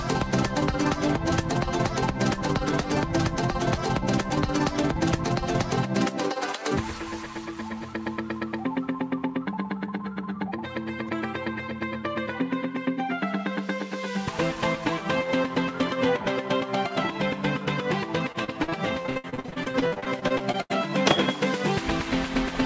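From 18.32 to 20.72 s, the call suffered repeated packet loss: packets kept going missing or arriving too late, and 26 separate gaps opened over those 2.4 seconds, the longest about 80 ms. Each hole was covered by stretching the last received sound, so roughly a third of the stretch is patched material. The audio turns choppy and robotic, with pieces dropping out, over a band that already stops at 8 kHz, which fits G.722 at 64 kbps.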